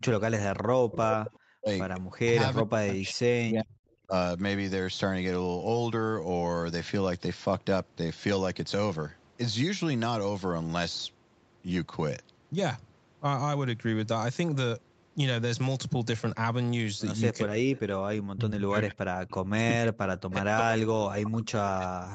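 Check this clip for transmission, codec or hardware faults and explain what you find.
Two call faults are present in this speech clip: speech suppressed in double talk and echo leak. Both point to a speakerphone call whose echo canceller struggled while both ends talked.

Speech suppressed in double talk occurs from 0.0 to 4.13 s, briefly from 17.43 to 17.64 s, and from 18.35 s to the end. When both sides speak at once, the canceller cannot tell the local talker from the loudspeaker's echo, and it turns both down. This is likely what happened here. In the opening stretch, about 2 s in total is affected, with drops of around 40 dB. The cut at 17.4 s is shallower, around 25 dB. The voice ducks, thins or breaks into pieces. On a waveform these show as sudden envelope collapses mid-phrase. A spectrogram shows energy vanishing across the band, with upper harmonics going first.

Echo leak appears at 1.26–1.39 s, 3.05–3.13 s, 17.75–18.23 s and 19.30–19.35 s. 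The far side's canceller likely left residue of its loudspeaker output in its microphone signal, which was sent back. That residue is a faint delayed copy of the voice, trailing by about 0.39 s. It sits roughly 15 to 35 dB below the speech, loudest in the first scrap and longest around 18 s. On a spectrogram it appears as a weaker, smeared repeat of earlier harmonic patterns, offset in time.

Content stops near 8 kHz, consistent with Opus at around 32 kbps. That band limit is the normal call path, not a fault.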